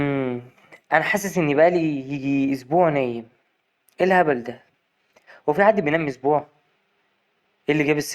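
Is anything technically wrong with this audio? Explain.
No, nothing technically wrong stood out on listening to this speech clip.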